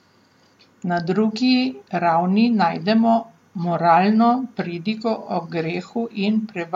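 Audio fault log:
No fault is logged for this speech clip.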